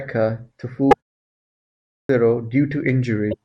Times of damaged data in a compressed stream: 0.90-0.94, 3.30-3.34

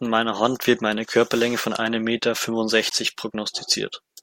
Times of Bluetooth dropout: 2.90

